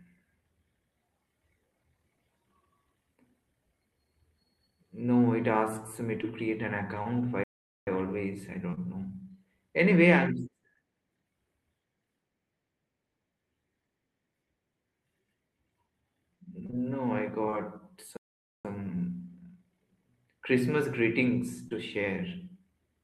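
At 6.21 s and 7.03 s, short concealed packet loss: about 20 ms of audio went missing and the decoder extended the preceding sound, leaving a brief smear rather than silence. From 7.43 to 7.87 s a playback stall cuts the sound to silence for about 0.43 s, likely because the player ran short of data. This is much longer than a concealed gap. Concealed losses return at 8.70 s, where two arrive back to back and the smear runs to about 8.79 s, and again at 10.75 s. Between 16.66 and 17.54 s come scattered short gaps, roughly three isolated patches of up to about 20 ms each. A second stall silences the audio from 18.17 to 18.65 s, about 0.48 s, again likely a starved player. A final concealed loss at 21.68 s brings one more brief smear.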